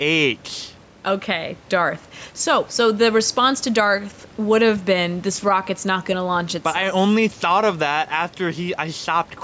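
Gain pumping runs through the whole speech clip: the level swings about 5 dB, pulled down under loud bits, likely a limiter taming far-too-high mic gain.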